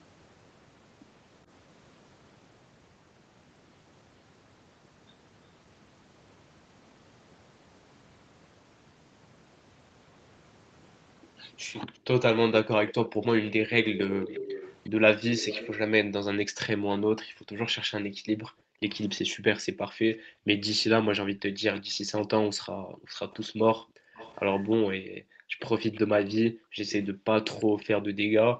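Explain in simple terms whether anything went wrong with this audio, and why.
A faint second copy of the sound trails the original by about a third of a second, from 11.94 to 15.77 s, again from 21.76 to 24.76 s, and from 25.93 to 27.85 s. It is clearest in the first stretch and gets quieter each time. This is an echo leak. The likely cause is that someone was on a loudspeaker and their echo canceller didn't fully remove what their microphone picked up, so part of it came back down the line.

From 16.43 s to the end, the quiet background of the room keeps dipping and at its deepest almost disappears, then comes back. This is background gated by the echo canceller. Each time the loudspeaker played, the canceller turned the microphone down sharply to keep echo out, and the room sound went with it until the canceller let go again.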